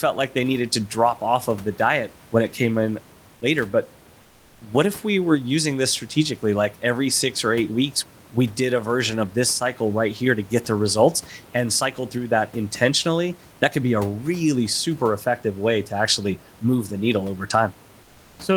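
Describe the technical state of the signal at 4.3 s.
Comfort noise in place of the background runs from 4.21 to 4.61 s, about 400 ms, ending just before "if we were using". The likely cause is discontinuous transmission, as in Opus DTX: the sender stops sending during the pause, and the receiver fills it with synthetic noise. The real room noise, sitting about 32 dB below the loud parts, gives way to a flat, featureless hiss about 3 dB quieter, then returns when sound resumes.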